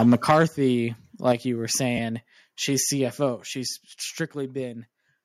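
Microphone overload from 0.00 to 0.44 s is likely from input volume set too high. Peaks run about 10 dB past the converter's limit, flattening a few percent of samples, and the loudest syllables get a harsh, crackling edge.

Microphone volume stepped down at 0.31 s, by about 4 dB. The call software likely cut the device's input volume in one step, so voice and background drop in level together, abruptly.

Microphone overload returns from 1.26 to 1.32 s, likely again too much input gain. It is milder, about 2 dB over, with a small share of flattened peaks giving a brief gritty crackle.

Microphone volume stepped down at 1.32 s, just before "you were", by about 6 dB. This is likely another one-step gain cut reacting to the clipping, and both voice and room fall quieter.

Lost LE Audio frames from 1.97 to 1.99 s, just after "you were", leave a 15 ms gap, which fits two 7.5 ms LC3 frames. The decoder repeats the last spectrum with scrambled phase, so the tone briefly smears into a noisy blur.

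Microphone volume stepped down at 3.36 s, by about 3 dB. This is likely one more automatic input-gain reduction, heard as a small sudden drop in overall level.

Lost LE Audio frames at 3.48 s cover about 7.5 ms, consistent with a single frame. The concealment substitutes a randomised copy of the previous spectrum, and the result is a tiny noisy smudge in place of clean tone.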